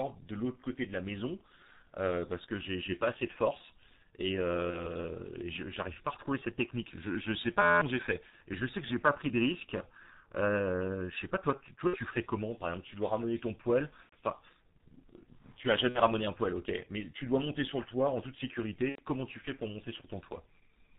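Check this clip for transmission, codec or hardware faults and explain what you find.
Three faults are present: heavy codec damage throughout, repeated packet-loss gaps, and one hang loop.

G.723.1 codec, throughout: the 6.3 kbit/s, 30 ms-frame coding cuts everything above 4 kHz and tracks the voice slowly, leaving speech muffled, hoarse and smeared.

VoIP packet loss concealed by the speech codec, at 4.70, 8.30, 11.87, 14.03, 15.89 and 18.89 s: the decoder extrapolates the missing 30 to 90 ms from its last pitch and filter, producing fading buzzy stretches and weak speech afterward.

System hang loop, 7.62 to 7.81 s: a frozen system left the hardware replaying an 11.61 ms piece, fitting a 512-sample buffer, seventeen times, giving an 86 Hz buzz over roughly 200 ms.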